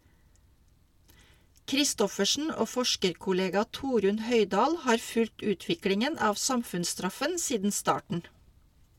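At 8.13 s the speech lurches forward, as if a sliver of sound had been nipped out. These are compressed frames skipped. About one frame, roughly 20 ms of audio, never reached the output, because it was missing from the file or the decoder rejected it as damaged. The frames here are 21.3 ms long, so the audio jumps ahead by about the length of one frame.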